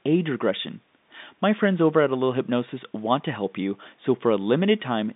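Nothing to flag here: the speech comes down a G.711 telephone line, so it lives in the usual phone band of about 150 Hz to 3.7 kHz with nothing above 3.8 kHz, and that narrow, boxy quality is simply the format at work.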